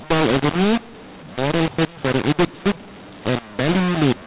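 Telephone speech, band-limited near 4 kHz as 8 kHz G.711 coding implies, suffers mu-law and A-law mixed up throughout. It was coded as mu-law but decoded as A-law. Levels come out scrambled. The voice sounds harsh and distorted, and pauses are filled with lifted noise.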